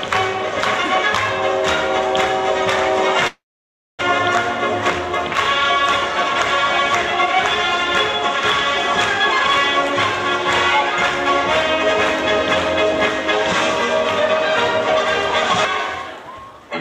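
A long network dropout runs from 3.27 s to 4.03 s. The sound does not simply stop: the last moment before the gap is stretched into a buzzy, hissing continuation that fades, and then roughly 0.6 s of silence follows. When the audio returns, about 0.6 s of the original material is missing and the timing has shifted by around a tenth of a second. This is likely a run of packets that never reached the receiver, which filled the hole by concealment until it had nothing left to extend.

A jitter buffer speed-up occurs from 16.02 s to 16.61 s. The sound plays at about 114% speed without any change in pitch, so this stretch comes across as rushed. After delayed packets arrived in a bunch, the buffer held more audio than it targets. The receiver worked the backlog down by cutting many tiny pitch-period-length slices, trimming roughly a tenth of a second in total.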